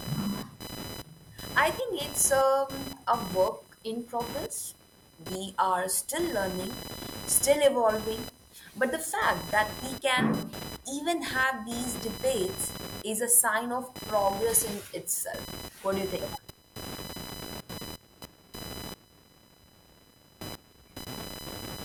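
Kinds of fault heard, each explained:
computer activity noise: computer load changes disturb the shared ground, adding a buzz near 1 kHz, about 15 dB below the speech, seen as a spectrogram band.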